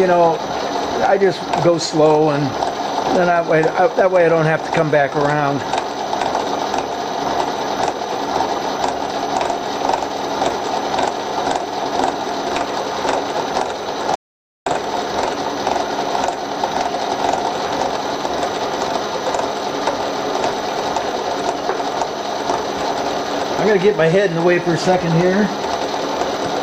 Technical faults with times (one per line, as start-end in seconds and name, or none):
14.15-14.66 audio dropout to silence